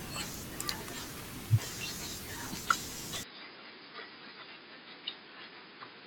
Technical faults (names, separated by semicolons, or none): compressed frames skipped; input switched to a poorer device